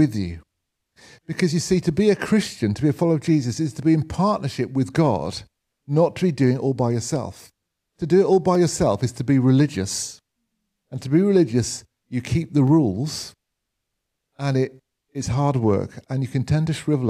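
Dropped samples likely cut a fraction of a millisecond from the stream at 8.55 s and 12.68 s, so the waveform jumps, producing two sharp clicks.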